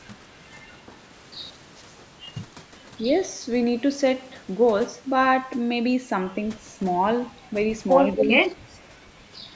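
From 8.13 to 8.32 s an echo leak is heard: a faint delayed copy of the speech trails the talker by about 232 ms, around 10 dB below it. The likely cause is a far-end loudspeaker echo that the echo canceller failed to remove and sent back.

Overlapping this, from 8.16 to 8.58 s and again from 8.81 to 8.86 s, the talker's level dips by up to around 10 dB in short pieces, roughly a third of a second in the first stretch. This is speech suppressed in double talk, likely the echo canceller attenuating the talker as well as the echo while both sides spoke.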